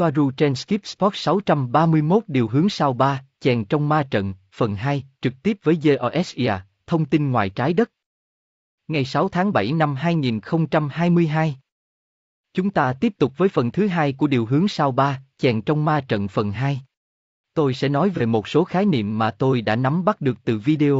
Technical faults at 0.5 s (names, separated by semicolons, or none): low-delay AAC compression